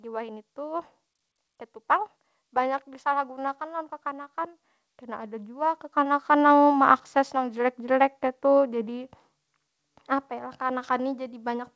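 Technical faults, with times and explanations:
5.0 to 9.2 s, automatic gain rising: the level climbs steadily by about 8 dB over roughly four seconds, and the speech and the background noise swell together rather than the speech alone getting louder. That shared rise shows an automatic gain control judging the input too quiet and slowly raising its gain on the whole signal. The sound arrives through a wideband call codec path with nothing above 8 kHz.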